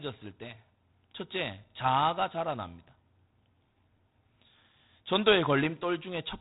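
Throughout, the speech carries G.726 ADPCM damage. Coding each sample as a few bits of difference from an adaptive prediction leaves a harsh, rasping hiss that rises and falls with the speech level, which fits 24 kbit/s. Nothing passes above 3.8 kHz.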